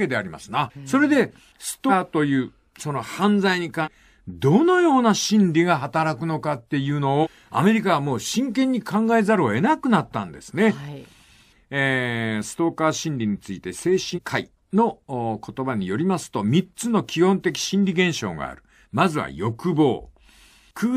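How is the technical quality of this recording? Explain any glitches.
Four glitches interrupt the speech, all compressed frames skipped: at 1.88–1.91 s, 3.83–3.88 s and 7.22–7.27 s the audio jumps ahead by roughly a third of a second, and at 14.14–14.19 s by about half that. Whole coded frames never reach playback, so the speech leaps forward in steps that fit a 46.4 ms frame. Unlike a dropout, there is no silent gap.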